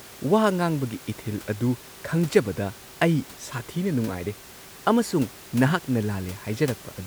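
No technical faults can be heard anywhere in the speech. The only other sound is the room noise around the microphone, sitting about 20 dB below the speech as part of the recording itself.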